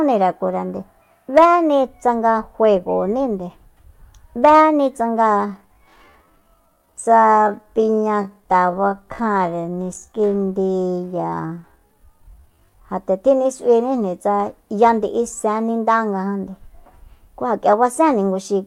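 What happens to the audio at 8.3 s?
At 8.3 s the speech is inside a time-stretched section running from 5.44 s to 12.84 s. Here the pace drops abruptly to about 0.58 times normal speed, yet the pitch stays where it was. The likely cause is software stretching the audio to fill a set length, repeating short slices to keep pitch steady. Those repeated slices make the slowed speech drag until normal pace returns.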